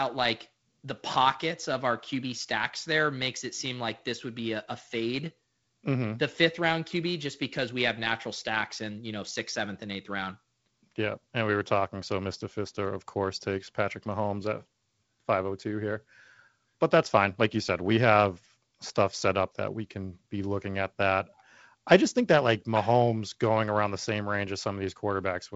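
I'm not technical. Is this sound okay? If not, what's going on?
Yes, no faults: it's ordinary G.722 wideband telephone speech, with nothing above about 7.7 kHz and only the faint upper-band hiss that kind of phone line normally has.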